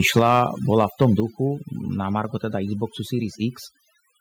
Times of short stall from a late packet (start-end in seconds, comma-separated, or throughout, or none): none